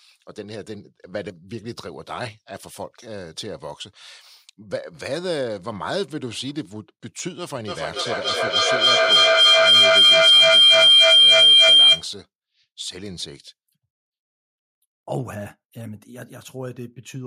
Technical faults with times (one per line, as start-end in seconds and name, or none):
7.68-12.12 feedback howl